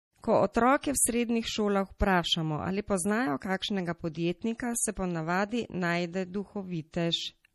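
Throughout the speech nothing sounds above 13.5 kHz, and the remaining detail has a watery, swirling texture with chirpy sibilants, likely from MP3 compression at a low bitrate, around 40 kbps. Unlike a plain low-pass filter, the damage shifts from moment to moment rather than simply dulling the sound.

At 4.57 to 4.60 s and again at 6.91 to 6.94 s, a hiss of about 23 ms comes just before a sharp attack, which then sounds softened. This is pre-echo: the codec spread its noise across the whole block, into the quiet before the onset. Reverb trails after a sound, but this smear leads it.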